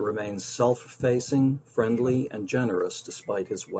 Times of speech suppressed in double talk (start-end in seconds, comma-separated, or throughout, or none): 1.71-3.79